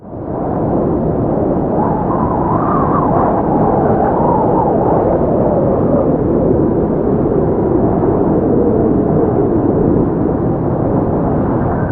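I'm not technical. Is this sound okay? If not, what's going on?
Yes, nothing stood out as a problem when listening to it.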